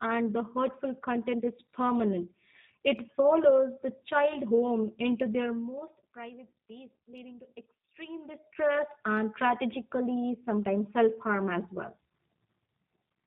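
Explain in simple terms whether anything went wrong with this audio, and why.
The speech sounds slightly rough and synthetic from start to finish, with a muffled, phone-like dullness. That's G.729 codec damage. This internet-calling format rebuilds each short slice of speech from a simplified model of the voice and cuts off everything above 4 kHz.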